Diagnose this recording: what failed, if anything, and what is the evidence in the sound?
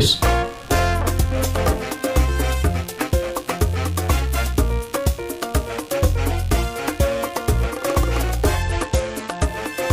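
Computer activity noise runs through the whole recording, a buzzing, chirping texture pulsing at roughly 70 times a second and sitting about 25 dB below the signal. It comes from the analogue wiring: processor, graphics or mouse load currents modulate the ground shared with the audio circuit, so the noise follows the computer's activity rather than the sound. A spectrogram shows regularly spaced vertical striations and a comb of harmonics; the waveform carries a low, ragged pulse train.

A Bluetooth SBC bit pool drop hits the codec stage from 8.62 to 9.45 s. The treble suddenly dulls and a gritty, granular noise rises, then clears. This fits a congested link forcing the bit pool from about 31 down to 12, near 88 kbps, so the upper sub-bands get almost no bits and the rest are coarsely quantised. On a spectrogram the top band goes dark over that span while a hazy noise floor fills the lower bands.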